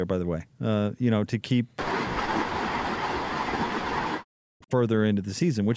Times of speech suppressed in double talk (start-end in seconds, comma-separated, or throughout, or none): 2.23-4.74